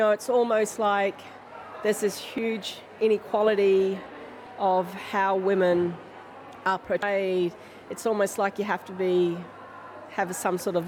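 Damaged data in the compressed stream is heard as three very brief glitches, at 2.38, 4.46 and 7.02 s. At each point corrupted bytes make the decoder misread a frame, lose sync and hunt for the next valid header, leaving a tiny blip in the audio.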